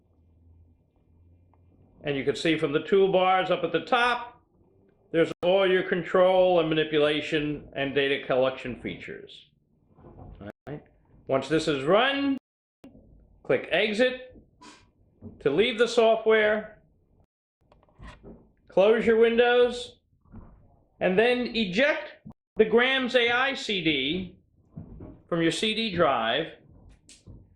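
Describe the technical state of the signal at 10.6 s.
At 10.6 s you're inside a dropout from 10.50 to 10.69 s: the sound cuts to about 167 ms of silence, then resumes. It's likely a Bluetooth stall, where delayed packets let the headphone buffer run dry.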